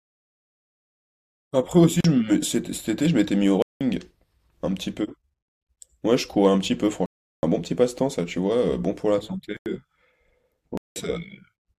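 Blocks of digital silence cut into this speech at 2.01–2.04 s, 3.62–3.81 s, 7.06–7.43 s, 9.57–9.66 s and 10.77–10.96 s, lasting 38 to 372 ms. The sound cuts out abruptly and returns with no fade. Four of the lengths fit whole blocks of roughly 4096 to 16384 samples left unfilled.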